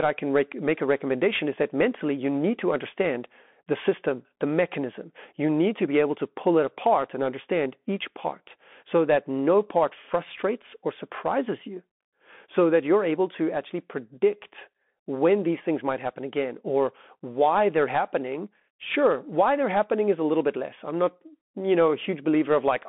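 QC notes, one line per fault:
Throughout: Bluetooth CVSD headset codec, one-bit delta coding that fits a 64 kbps link, passes nothing above 3.8 kHz, leaving scratchy sibilants and a granular hiss under the speech.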